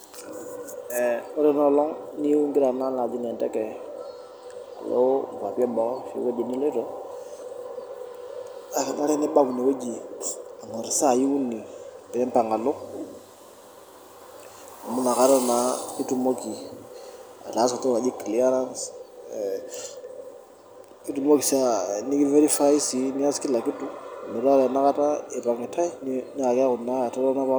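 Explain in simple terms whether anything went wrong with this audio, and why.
Nothing went wrong with this audio, because no fault can be heard anywhere in the speech.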